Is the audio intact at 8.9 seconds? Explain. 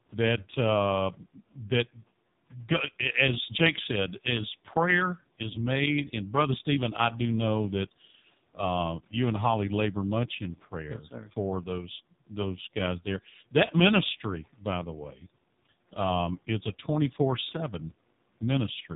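No. At 8.9 seconds, as throughout the clip, the speech passes through an AMR narrowband mobile codec at heavy damage, and the coarse, buzzy quality fits its lowest mode, around 4.75 kbps. The codec rebuilds the voice from a vocal-tract model fed by a few pulses per subframe, so it sounds synthetic, and nothing above 3.8 kHz survives. A plain low-pass filter would dull the top just as much but leave the voice natural. Here the faint room noise, about 30 dB below the speech, warbles as well.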